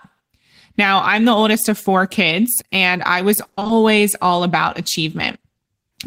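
From 3.43 to 3.71 s, repeated packet loss (robotic sound): seven short gaps, each patched by extending prior audio, leave choppy speech and comb-like repeated spectrogram slices.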